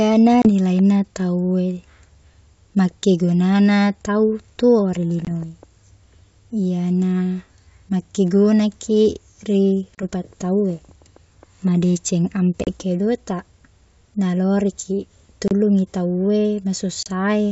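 Packet loss on the ADPCM call interrupts the speech six times, at 0.42, 5.25, 9.95, 12.64, 15.48 and 17.03 s. Each time a few packets go missing and are filled with silence, leaving a hard-edged hole of about 30 ms (20 ms at 5.25 s). The decoder's adaptive predictor and step size lose track of the sender's, so the speech comes back with brief, slight distortion that settles within some tens of milliseconds.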